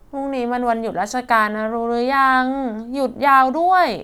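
No technical faults can be heard in this recording.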